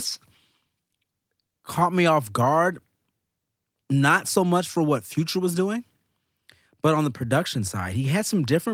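Listening closely to the speech, nothing stood out as a technical fault at any point.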